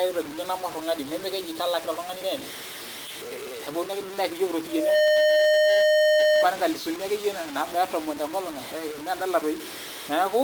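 A speech clip with two problems. All the way through, the speech has a coarse, grainy distortion that rides along with it, rougher on soft syllables, while the quietest bits collapse into silence or sputter rather than fading smoothly. The grit sits only about 15 dB under the speech. That's most likely low bit depth without dither: the audio was chopped down to around 5 bits by truncation, so the rounding error tracks the signal instead of spreading into a steady hiss. Then from 4.68 to 6.50 s there's a loudspeaker feedback squeal, a single tone at 610 Hz that swells up in roughly a third of a second and ends up about 10 dB louder than the speech. Mic and speaker formed a loop whose gain topped one at that frequency, so the tone kept feeding itself.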